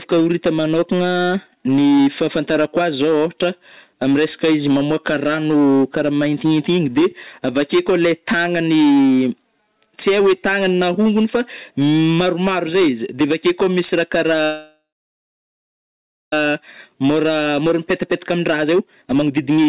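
Speech heard through a narrowband call path, with nothing above 4 kHz, and hard clipping throughout: the level is driven about 10 dB past what the stage can pass, so around a tenth of the samples are cut flat, adding harsh high harmonics and a fuzz on every loud syllable. From 14.45 to 16.33 s there is a call audio freeze. The last sound is stretched into a decaying buzz and then about 1.5 s of silence, likely from delayed packets draining the jitter buffer. Playback resumes where it stopped, so nothing is lost but the delay grows by 1.87 s. From 17.37 s to 19.68 s a jitter buffer speed-up follows. The receiver trims short pitch-period segments to recover that backlog, so the speech runs at 120% speed at the same pitch, sounds hurried, and sheds roughly half a second.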